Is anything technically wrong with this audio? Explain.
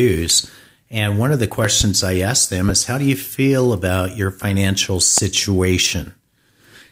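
Yes. Loud pops: a double pop at 1.65 to 1.84 s and single pops at 2.69 to 2.72 s and 5.18 to 5.21 s jump well above the speech, which carries on underneath. These are likely electrical pulses, such as a switch, static or driver glitch.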